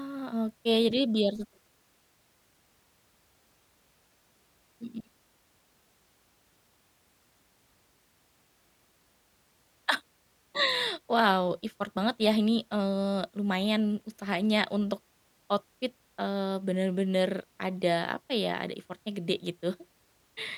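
Speech, with a filter restarted on every block from 1.36 to 2.49 s. Each block starts from silence, so a tick repeats as a 188 Hz buzz, which fits a 256-sample block.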